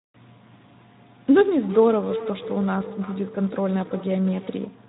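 It's a speech clip, and the whole thing has that Speex codec sound, noisy and hoarse with plainly audible damage, which fits a Speex stream at around 11 kbps. From 1.55 to 4.82 s there's feedback echo between two devices: the speech comes back roughly every third of a second, thinner and ringier, peaking about 11 dB below the voice.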